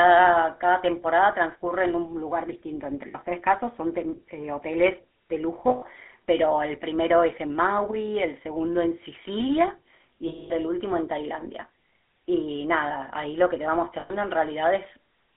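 Throughout, the GSM full-rate codec models the vocal tract from a sparse pulse excitation, which fits 13 kbps coding, leaving speech buzzy and gravelly, band-limited to 250 Hz–3.5 kHz. Lost GSM frames at 3.08–3.15, 5.68–5.84, 10.28–10.51 and 14.00–14.11 s (60–220 ms) were concealed by repeating the last good frame, producing a rough, metallic ring.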